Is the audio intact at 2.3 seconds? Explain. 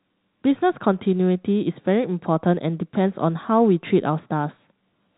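Yes, at 2.3 seconds the speech is intact, with no dropout, click or distortion, only the narrow telephone band of G.711 coding that stops short of 4 kHz.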